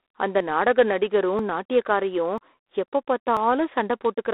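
A harsh, rasping hiss rides along with the speech throughout, rising and falling with its level, and nothing is heard above about 3.9 kHz within a telephone-style band of roughly 300 Hz to 3.6 kHz. This is plainly audible G.726 ADPCM damage, which fits coding at 24 kbit/s, where too few bits are left for the difference from the codec's adaptive prediction. The speech also skips at 0.40, 1.39, 2.38 and 3.37 s, each time losing a sliver of roughly 10 ms with the two sides butted together. The regular spacing of about one second points to audio missing between chunks, likely a recorder or processor dropping a little at each 1.0 s block boundary.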